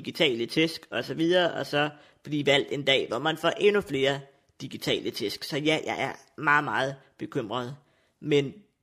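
A speech recording with nothing technically wrong with it at any point.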